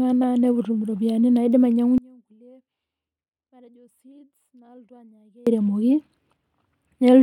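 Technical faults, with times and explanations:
1.98 to 5.47 s, audio dropout to a faint residue: the speech cuts out abruptly mid-flow and stays gone for about 3.5 s, then snaps back just as suddenly. The gap isn't true silence; a faint residue remains, roughly 30 dB below normal level. That leftover points to the signal likely being lost upstream while the rest of the chain stayed live, which is why it sounds like a hard break rather than a natural pause or fade.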